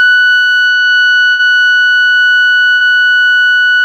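Two bursts of packet loss, at 1.31 to 1.41 s and 2.73 to 2.83 s, leave gaps that the receiver fills by holding and fading the last music, before resuming about 80 ms further on.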